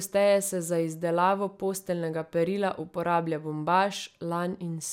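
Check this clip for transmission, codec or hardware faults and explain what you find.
Nothing stood out on listening to this speech recording.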